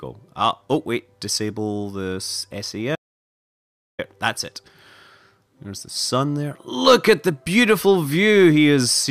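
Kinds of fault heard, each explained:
Audio dropout to silence: from 2.96 s to 3.99 s, about 1.03 s of signal disappears and is replaced by silence, with no room tone or noise floor left, then the sound resumes mid-flow as if spliced. The likely cause is the input being lost, through a disconnect, failed link or mute, while recording continued. On a waveform it is a dead flat line; on a spectrogram, a fully black vertical band.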